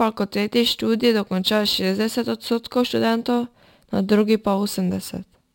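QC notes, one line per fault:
throughout, imaging from sample-and-hold upsampling: each sample was repeated with no smoothing filter, which fits 24 kHz audio raised to 44.1 kHz. A mirrored copy of the speech spectrum fills 12 to 24 kHz at about -22 dB, heard as a bright metallic fizz that follows the speech.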